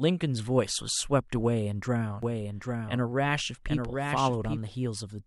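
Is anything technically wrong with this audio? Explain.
Yes. From 2.23 to 4.59 s there is a doubled audio track: a second copy of the speech trails the original by around 0.7 s at roughly 5 dB quieter, likely from a slower capture path or a misaligned edit. It sounds like a dry, full-band overlapping echo that starts and stops abruptly. On a spectrogram, the same patterns repeat shifted in time with hard edges, and the waveform shows sudden extra density.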